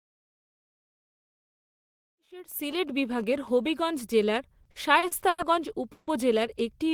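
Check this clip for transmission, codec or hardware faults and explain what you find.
Three faults are audible: a burst of phone interference, a run of stutters, and one short freeze.

GSM signalling bursts, 1.92 to 3.48 s: a nearby 2G phone in a call with its user silent emits grouped radio bursts that the audio circuit rectifies. This produces even ticks with a longer 217 Hz buzz twice a second, about 20 dB below the speech, partly under the fade-in. The grouped rhythm sets it apart from the continuous buzz of an active call.

Repeated stalls (stutter), 4.63 to 5.41 s: packets arrived more slowly than they played, so the jitter buffer emptied five times. The receiver stretched the last sound to fill 210 ms in all, the longest gap 90 ms, about 27% of the span. Nothing is lost, but the speech drags. Several short hitches, rather than one hold, separate this from a freeze.

Call audio freeze, 5.92 to 6.10 s: the last sound is held as a fading buzz or hiss for about 150 ms, then speech resumes where it stopped with nothing missing. 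This is likely a single 150 ms delay jump that emptied the jitter buffer. One sustained hold, not a series, distinguishes it from the stutter just before.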